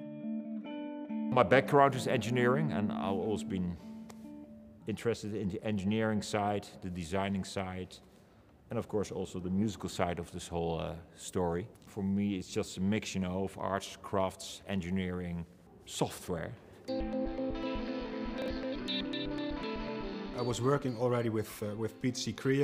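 At 18.42 to 18.48 s, chunks out of order: one 20 ms chunk plays two chunks late, producing a brief jumbled moment with three hard joins.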